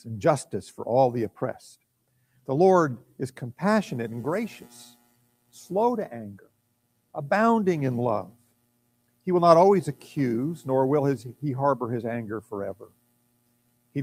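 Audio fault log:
Throughout: noise suppressor applied to music or sounds. A speech-tuned noise suppressor was left running on this material, and it treats anything steady, any ambience and any reverb as noise to be pulled down. The gain keeps swinging by somewhere around 15 dB, so the level pumps and flutters. Sharp onsets mostly get through, but sustained parts and tails sag, leaving the whole thing sounding thinner and less stable than it should.
1.77–2.48 s, 3.04–3.19 s, 4.92–5.56 s, 6.38–7.14 s, 8.3–9.27 s, 12.74–13.95 s: sound cut by the noise suppressor. In each of these stretches the suppressor decided the sound was noise and clamped it harder than the rest, dropping it by about 18 dB at worst. The short dip at 3.04 s only goes down about 12 dB. Held or decaying sound suffers most here, sinking away or getting its tail chopped short, while anything sudden still pokes through.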